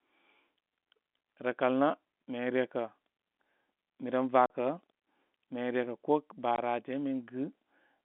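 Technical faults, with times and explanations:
4.46–4.50 s and 6.56–6.58 s, packet loss filled with silence: 40 ms and 20 ms holes, fitting two and one lost 20 ms packets, with hard edges.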